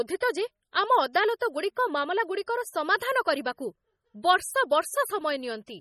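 Across the whole recording the speech has a watery, swirling quality, with metallic chirping on the s sounds and smeared consonant onsets, and nothing is present above 16.5 kHz. These are the marks of heavy MP3 compression, likely at a low bitrate in the region of 32 kbps. Starved of bits, the encoder cuts the treble at a fixed point and drops weak frequency lines that flicker in and out from frame to frame.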